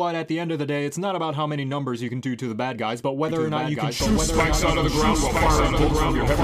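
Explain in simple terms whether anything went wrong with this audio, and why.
Something did go wrong. From 3.29 s to the end, a second copy of the same sound joins in, running about one second behind the first. This is a doubled audio track. The copy is a bit quieter, but it sounds just as clear. There is no fading tail, so it is not a real echo. It cuts in suddenly. The likely cause is the sound being picked up twice, once through a slower route.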